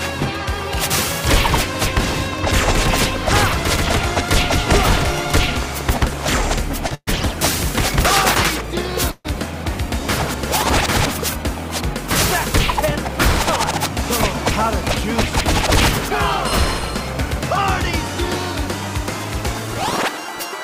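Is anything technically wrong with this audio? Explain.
Yes. The clip contains a short stall, two call audio freezes and two stretches of jitter buffer speed-up.

At 6.87 s the sound is held slightly too long with a faint buzz or dip. This is a short stall from a late packet. The receiver's jitter buffer ran dry when a packet failed to arrive on time, so it stretched the last sound by about 31 ms. When the packet turned up, playback resumed from the same point, so nothing was lost, only delayed.

Just after, from 6.95 to 7.09 s, and again from 9.11 to 9.27 s, the audio freezes. The last sound continues as a fading buzz or hiss, then drops to silence for about 60 ms and about 40 ms respectively. These are call audio freezes, likely caused by packets held up in transit, leaving the jitter buffer empty. The receiver filled roughly 124 ms and 131 ms, then carried on where it stopped. This inserts gaps rather than cutting anything out.

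From 13.89 to 17.40 s the sound runs slightly faster at unchanged pitch, about 3% fast. From 19.24 to 20.33 s it is more noticeably rushed, about 6% fast. This is jitter buffer speed-up. The buffer held more audio than its target, so the receiver trimmed many tiny pitch-period-length pieces to catch up. This removed roughly 150 ms in the first stretch and about 70 ms in the second.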